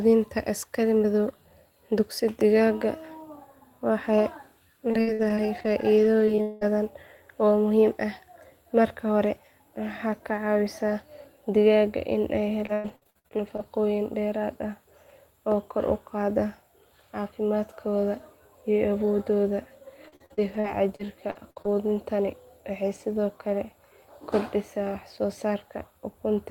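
Choppy, robotic-sounding stretches at 4.9–6.7 s, 12.7–13.6 s and 20.0–21.7 s come from repeated packet loss. The speech kept dropping out, and each gap was patched by extending the sound just before it.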